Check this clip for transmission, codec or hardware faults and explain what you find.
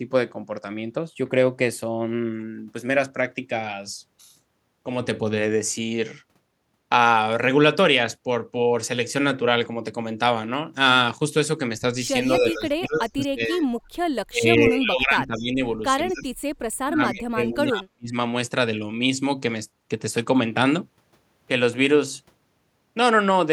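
Two faults appear in the second half of the speech, both tied to echo cancellation on a call where the two sides overlap.

Speech suppressed in double talk occurs at 12.38 to 13.67 s (dipping about 25 dB), 14.27 to 15.61 s (about 20 dB), 16.08 to 16.29 s (about 20 dB) and 16.67 to 18.15 s (about 40 dB). The speech sinks and breaks up in patches, most likely because the canceller couldn't tell this talker from returning echo and attenuated both.

Echo leak appears as brief delayed copies at 12.94 to 12.99 s (about 15 dB below the speech) and 15.37 to 15.41 s (about 30 dB below), each trailing by 219 ms. These faint scraps are likely residual loudspeaker pickup that the far end's canceller failed to remove.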